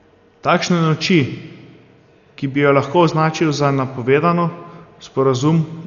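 From start to finish the speech sounds dull and muffled, with nothing above about 6.9 kHz and a rough, fluttering noise hanging around the voice. That's likely heavy Dolby Digital compression at a rate that fits 48 kbps, where the encoder narrowed the band and the decoder filled bit-starved lines with dither noise.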